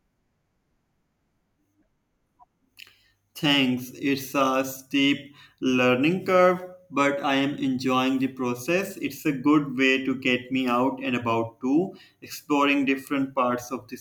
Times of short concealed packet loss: none

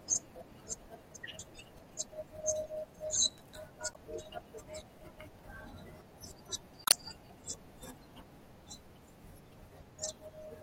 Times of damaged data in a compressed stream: 3.91-3.96, 6.84-6.94

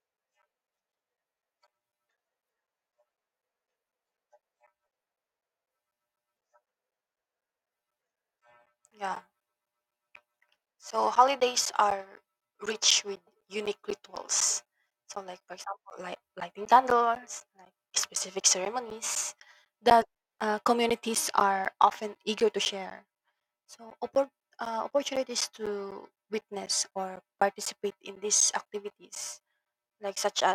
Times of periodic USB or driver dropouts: 0.17-30.41

